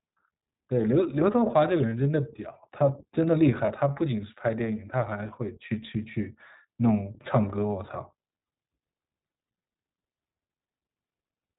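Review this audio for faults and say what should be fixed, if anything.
The whole speech track has the iLBC codec's narrowband, slightly rough and synthetic quality: nothing above 4 kHz, which fits the 15.2 kbps, 20 ms-frame mode. Use a wideband codec like Opus if the link allows.

Lost iLBC frames at 1.90–1.93 s and 3.66–3.71 s come out as brief buzzy held-vowel patches, with concealment repeating the last pitch cycle before clean audio resumes. Add FEC or a deeper jitter buffer to cut packet loss.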